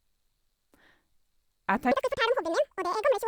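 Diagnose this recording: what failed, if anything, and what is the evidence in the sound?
Audio read two samples at a time (double speed), from 1.92 s to the end at 3.27 s. The speech abruptly runs twice as fast and jumps a full octave (12 semitones) higher. This points to a sample-format conversion fault: the reader treats each pair of samples as a single frame, as if the stream held two channels or samples of double width. Playback therefore consumes material at twice the rate.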